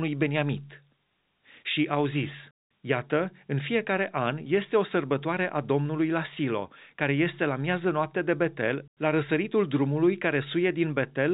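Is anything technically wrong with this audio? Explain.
No, this speech carries the narrow telephone band of G.711 mu-law coding, with nothing above 4 kHz and only the format's faint level-following quantisation hiss, and no problems beyond that are audible.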